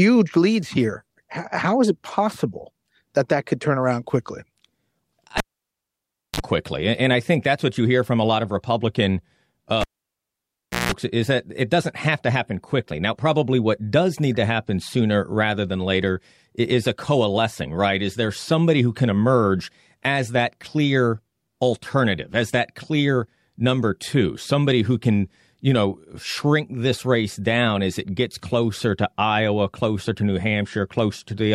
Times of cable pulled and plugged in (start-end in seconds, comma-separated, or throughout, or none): 5.38-6.40, 9.81-10.92